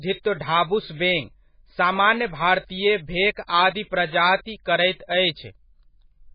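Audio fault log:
Throughout, MP3 compression: the speech carries heavy codec damage and nothing above 5 kHz, likely from MP3 encoding at a very low bitrate such as 16 kbps. With too few bits, weak frequency lines drop in and out between frames, giving a watery, swirling texture and smeared attacks.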